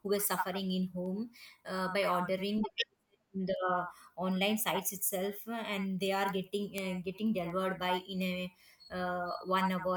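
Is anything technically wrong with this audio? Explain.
Yes. From 0.34 s to 9.64 s, sharp ticks of uneven strength recur roughly every 0.4 s, about thirty in all. These are word clock ticks: the receiving device's clock runs about 70 ppm off the sender's, so each slip misreads samples and drops or repeats one.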